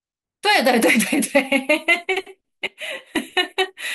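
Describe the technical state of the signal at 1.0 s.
At 1.0 s the speech signal is intact, with no audible technical fault at that moment.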